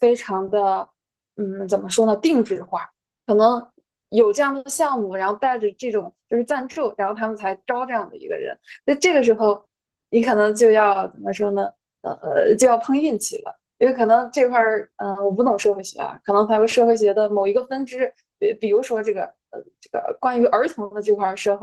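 Speech with Opus voice compression throughout: SILK codes the lower band and CELT the top, with coarse excitation coding giving plainly audible hoarse, slightly robotic damage, consistent with roughly 16 kbps.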